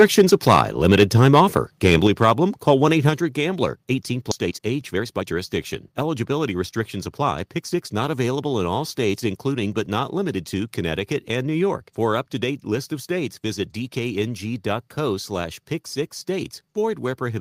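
Speech recording, opening with microphone overload: from 0 to 1.57 s and again from 1.85 to 2.31 s the loudest syllables have flattened tops and a harsh, crackling edge. That likely comes from input gain set high enough to drive peaks about 6 dB and about 4 dB past the converter's limit, with a few percent of samples clipped in the first stretch. Microphone volume stepped down twice, at 2.07 s and 3.09 s, each a sudden drop of about 5 dB and then about 4 dB in both speech and background, as an automatic gain control reacting to those distorted peaks would produce. At 4.31 s playback skips ahead with no gap, losing roughly a second of speech and joining the two sides almost directly, consistent with the jitter buffer discarding audio to catch up. Jitter buffer speed-up follows. From 4.45 to 5.34 s the speech runs at 136% speed with unchanged pitch and sounds noticeably hurried as about a third of a second is trimmed out in short pitch-period pieces. 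From 5.92 to 7.75 s a milder 108% speed-up removes about 150 ms more.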